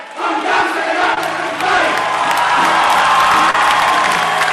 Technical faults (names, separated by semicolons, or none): short concealed packet loss